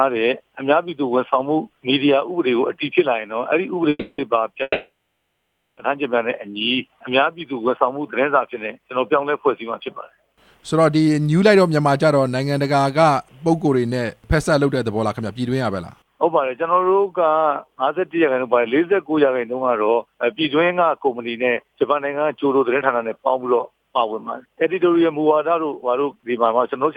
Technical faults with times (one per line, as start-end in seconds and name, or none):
3.89-4.20 call audio freeze
4.62-5.79 call audio freeze
6.46-7.32 jitter buffer slow-down
14.95-15.50 jitter buffer speed-up
18.94-22.01 jitter buffer speed-up
25.16-26.88 jitter buffer speed-up